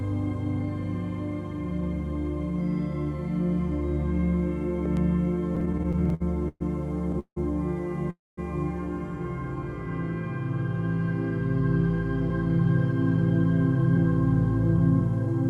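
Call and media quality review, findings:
Loud pop, 4.86 to 4.99 s. Two sharp pops in quick succession, peaking a few dB above the sound, which continues underneath. Likely a voltage pulse from a plug, switch, static discharge or driver glitch, shaped by downstream circuitry.

Repeated stalls (stutter), 5.55 to 6.62 s. Twelve short hold-ups, longest 120 ms, about 290 ms concealed in all, roughly a quarter of the span. Jitter buffer repeatedly ran dry on late packets. Receiver stretched the last sound each time. Nothing lost, but the audio drags.

Call audio freeze, 7.19 to 7.38 s and 8.10 to 8.39 s. Sound held, then fading, with 80 ms and 210 ms of silence. Gaps of 169 ms and 270 ms inserted. Likely packets delayed in transit, emptying the jitter buffer. Playback resumes where it stopped, nothing missing.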